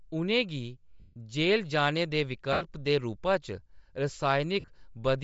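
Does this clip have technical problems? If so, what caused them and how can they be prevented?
Yes. Throughout, the speech sounds breathy and grainy, likely from Bluetooth LC3 compression at a low bitrate near 32 kbps. On a spectrogram, the upper band shows a noise fill. Using a higher LC3 bitrate prevents this.

Lost LE Audio frames occur at 1.00–1.16 s, 2.53–2.62 s, and 4.60–4.68 s. In the last, the gaps are scattered, with the longest run about 40 ms. The decoder repeats a noisy smear that fades, and it shows as a blurred spectrogram patch. A stronger, less congested radio link prevents these losses.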